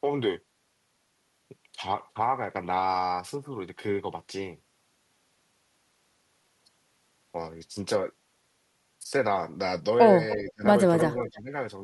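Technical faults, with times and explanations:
10.34–10.52 s, echo leak: The far end's echo canceller likely let part of its loudspeaker pickup through, so a faint copy of the speech returns about 0.3 s late, roughly 20 dB below the direct sound.
10.44–10.64 s, speech suppressed in double talk: With both sides active at once, the echo canceller likely mistook the talker for echo and turned everything down, so the speech drops by around 25 dB in pieces totalling about 150 ms.
11.14–11.51 s, speech suppressed in double talk: Again both sides overlap and the canceller likely clamps down on the talker too, giving a shallower dip of about 10 dB that breaks up roughly 200 ms of the speech.
11.28–11.41 s, echo leak: A weaker residue slips past the far end's canceller, likely from incomplete cancellation, heard as a faint repeat about 0.3 s behind the speech and some 30 dB down.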